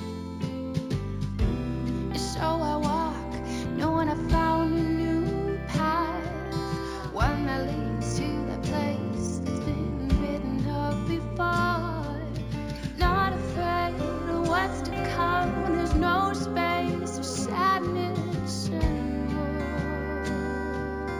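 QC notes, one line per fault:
throughout: imaging from linear upsampling. The rate was raised by joining samples with straight lines, and that weak interpolation filters poorly. The true band tops out near 8 kHz, which points to a 16 kHz source. Above it, a mirrored copy of the spectrum fills 8 to 16 kHz, roughly 30 dB below the signal. That leftover image gives a faint metallic shimmer on bright, high-pitched moments, and the real top end sounds dulled.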